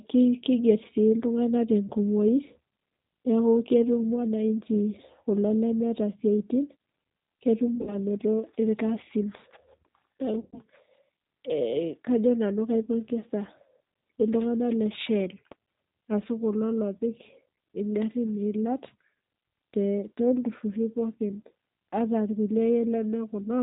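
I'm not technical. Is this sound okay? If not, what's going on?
No. Two problems are audible.

The first, G.729 codec, runs through the whole recording. This is a compressed internet-phone format. Instead of sending the actual sound, it sends a rough description of how the speaker's throat and mouth are shaped, plus a few clicks per tiny slice of time, and the far end rebuilds speech from that. Everything above about 4 kHz is thrown away. Here the result is plainly audible: speech sounds narrow, slightly rough and artificial.

The second is VoIP packet loss concealed by the speech codec. It happens three times. From 7.75 to 7.96 s, several short gaps are scattered together, the longest about 50 ms. From 10.40 to 10.62 s, about 130 ms of sound was lost. At 12.84 s, right after "kajo nanu", a brief 30 ms gap occurs. When pieces of the call go missing, the decoder guesses by repeating and fading what it last had. 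That turns the speech into a short buzzy or smeared sound, which stays weak for a moment afterward.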